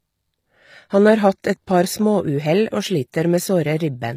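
From start to end the speech has a gritty, metallic top. The s sounds come out lispy. This is likely HE-AAC compression, at a rate that fits about 24 kbps. The treble is copied up from lower bands, so its harmonics never line up.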